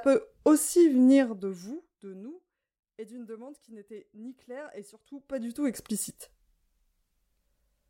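From 1.12 to 2.23 s the gain drops about 25 dB in unsmoothed steps, around 40 a second, causing zipper noise: a fast ticking over the speech. The same happens at 4.96 to 5.84 s, just after "n'était ni claire et", rising about 25 dB at roughly 50 steps a second.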